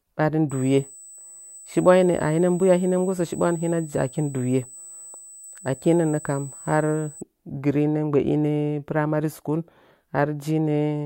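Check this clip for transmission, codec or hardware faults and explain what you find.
USB whine runs from 0.5 s to 7.2 s in this speech clip. The USB bus pulls current in bursts every 125 microsecond microframe, and that repeating draw leaks into the audio path through shared power or ground, leaving a whine fixed at 8 kHz, the microframe rate. Here it is a thin, high-pitched tone sitting roughly 20 dB below the speech, present beneath it throughout that span.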